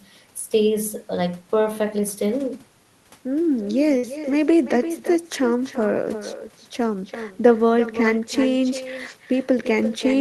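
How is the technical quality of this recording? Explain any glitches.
The recording carries two call faults: an echo trailing the speech and one short dropout.

Echo with no canceller, throughout: the far end's loudspeaker leaked into its microphone, and nothing removed it, so the talker's own voice returns after roughly a third of a second, about 11 dB quieter, a thin shadow behind every phrase.

Burst of packet loss, 3.97 to 4.06 s: incoming audio stopped arriving, so the receiver stretched the last sound for about 57 ms while fading it into a held buzz or hiss, then resumed with about 60 ms of speech missing.

Both faults sit on top of an Opus call path whose audio tops out at 12 kHz.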